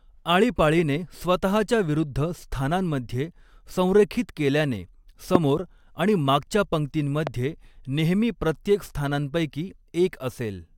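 A speech recording carrying two loud pops. The first lands at 5.35 s, right after "स्थानांमध्ये संरेखित केल्याने" and before "आणि मागच्या", standing roughly 20 dB above the speech. The second, at 7.27 s just ahead of "नेहमी प्रत्येक स्थानांपैकी", is somewhat softer at around 15 dB. Each is a single sharp pulse about 23 ms long while the speech carries straight on beneath it, which separates it from a dropout or clipping. A voltage spike from a switch, static discharge or driver glitch is the likely cause.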